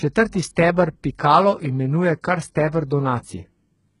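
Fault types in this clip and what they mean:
HE-AAC compression, throughout: The top of the spectrum in this speech stops at about 11.1 kHz, and the treble below that cut-off sounds synthetic rather than recorded. The likely cause is heavy HE-AAC coding, which fits a bitrate around 12 kbps. Only the lower band is truly coded, and the upper band is rebuilt by copying lower content upward under a coarse envelope, so its harmonics fail to match and s sounds come out gritty and metallic.
Pre-echo, at 0.32 s: A brief hiss of about 13 ms arrives just before a sharp attack, smearing its onset. The codec spreads quantisation noise evenly across each transform block. When a sudden loud onset sits late in a block, noise sized for that loud part also lands in the quiet stretch ahead of it. The noise is then heard before the attack it belongs to, and the attack itself loses its crispness.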